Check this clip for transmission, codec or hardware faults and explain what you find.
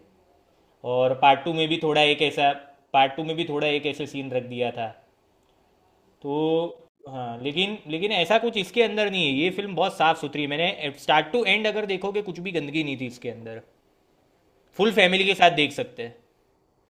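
Nothing stood out on listening to this speech recording.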